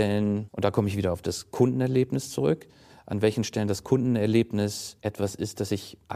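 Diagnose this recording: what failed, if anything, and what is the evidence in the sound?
Nothing failed: no stage of the chain, from the analogue wiring through to playback, leaves an audible trace of trouble in this speech recording. No event in the sound points to a defect anywhere along the way.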